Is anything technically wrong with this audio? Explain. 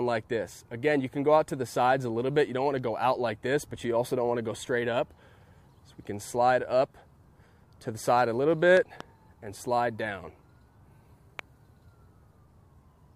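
Yes. Loud pops occur as a double pop from 8.77 to 9.03 s, peaking about 15 dB above the sound, then a single pop at 11.39 to 11.41 s, about 10 dB above. Each is likely a voltage step from a switch, plug or static discharge, heard as a sharp thump over the continuing sound. On the waveform they appear as tall spikes; on a spectrogram, as thin full-band vertical lines.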